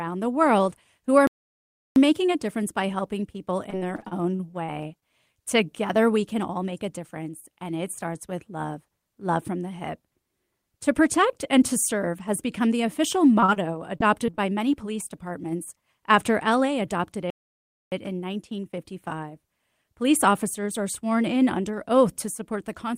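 At 1.27 s the speech drops out for about 0.69 s, until 1.96 s, then resumes. This is a playback stall, likely caused by the player running short of data or its output thread being blocked.

From 3.70 to 5.04 s the sound turns choppy, a robotic stutter with small pieces missing. This is repeated packet loss. Eleven gaps fall in quick succession, the longest 37 ms. Each one is bridged by stretching the preceding sound, so about 258 ms is filled in and 120 ms is simply lost, and roughly a fifth of the stretch is concealed.

Between 6.40 and 7.30 s the speech hurries forward at about 108% of normal pace while its pitch stays put. This is a jitter buffer speed-up. The receiver was holding more audio than it needed and trimmed around 70 ms in small pitch-period-sized cuts to bring the delay back down.

The robotic texture returns from 13.40 to 14.39 s, a second bout of repeated packet loss. Here there are seven gaps, the longest 36 ms, with 147 ms patched and 100 ms missing, about 15% of the span.

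At 17.30 s the audio halts again for about 0.62 s before continuing at 17.92 s. This second playback stall is likely due to the same kind of data starvation or blocked playback thread.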